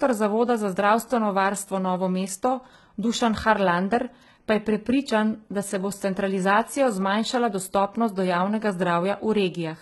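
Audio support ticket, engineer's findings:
Gritty, metallic sibilants throughout the speech, nothing above 11.8 kHz. Likely HE-AAC compression, heavy damage, fits roughly a 16 kbps stream. Top end is rebuilt by band replication from lower bands, so the harmonics don't line up and the esses come out lispy.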